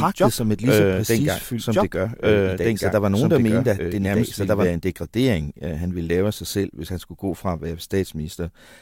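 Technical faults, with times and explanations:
0.0–4.66 s, doubled audio track: an equally loud, undecaying copy trails about 1.5 seconds behind, unlike echo, stopping abruptly before "en degradering øh han", likely from a slower second capture.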